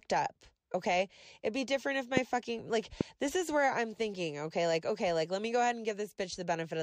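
At 2.17 to 2.19 s, just after "be different if", there's a loud pop, and another at 3.01 to 3.03 s, after "fucking like". Each is a single sharp click standing well above the speech, likely a voltage spike from a plug, switch or static, with the talking carrying on underneath.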